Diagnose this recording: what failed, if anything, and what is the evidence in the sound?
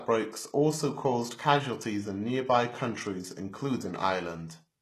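The codec stage failed: the speech carries plainly audible compression damage from start to finish, and nothing is present above about 12.3 kHz. The treble that remains sounds synthetic rather than recorded, with s sounds coming out gritty and lispy. The likely cause is HE-AAC compression at a very low bitrate, around 16 kbps. The codec encodes only the lower band and rebuilds the upper band by copying it upward under a coarse envelope, so the harmonics do not line up across the crossover.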